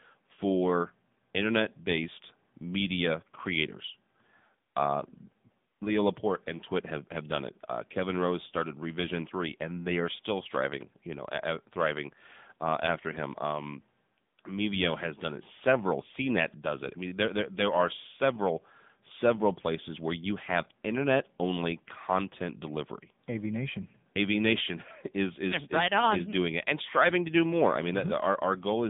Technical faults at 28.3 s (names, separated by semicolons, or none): AMR narrowband mobile codec